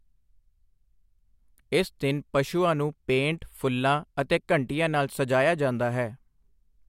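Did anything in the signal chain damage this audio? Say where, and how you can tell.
No, nothing along the way seems to have touched this speech recording; I can't hear any point where the chain left a mark on it.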